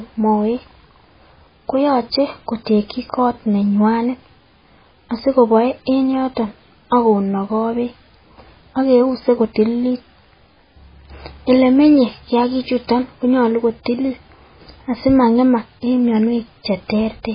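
MP3 compression runs throughout: nothing survives above 5 kHz, and heavy damage, likely from a very low bitrate near 16 kbps, leaves the speech watery, with smeared attacks.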